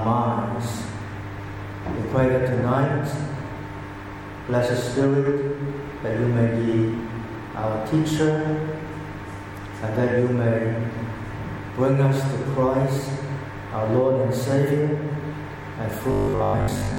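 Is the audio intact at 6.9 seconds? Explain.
Yes, the audio is intact at 6.9 seconds, with no dropout, click, distortion or other fault to be heard at that point.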